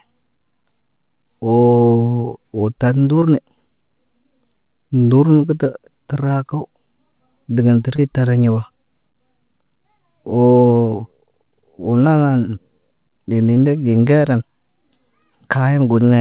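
Short concealed packet loss occurs four times, at 2.22–2.26, 3.20–3.24, 7.96–8.00 and 13.54–13.58 s. Each time, 20 ms of speech missed the decoder, and the receiver extended the preceding sound before blending back. The result is a brief smear or wobble within band-limited audio that stops at 4 kHz.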